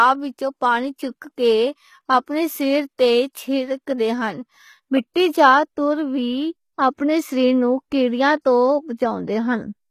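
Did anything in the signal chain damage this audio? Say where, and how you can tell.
Yes, at the codec stage, likely HE-AAC compression at a low bitrate near 20 kbps. Sibilants sound gritty and metallic throughout, with nothing above 15 kHz. The treble is synthesized from copied lower bands.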